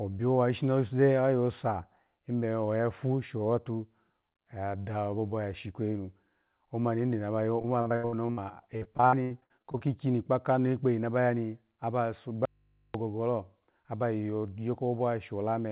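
From 7.62 to 8.39 s and again from 8.77 to 9.81 s, just before "kpa kano kpeyi na", repeated packet loss gives choppy, robotic speech. Short holes up to about 78 ms are stretched from the previous sound instead of going silent.

At 12.45 s, after "ba ya ni aba", the speech cuts out abruptly for about 0.49 s, leaving only mains hum about 40 dB down. This is likely an audio dropout to a faint residue, not a pause or fade.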